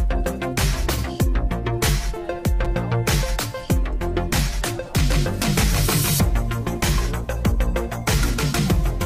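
At 2.65 s and again at 5.43 s there's a repeated buffer. New audio didn't arrive in time, so the last chunk got replayed, twice at the first spot and once at the second. The repeats are tiny, which fits a 256-sample buffer, so they come across as quick clicks or a brief buzz rather than an obvious stutter.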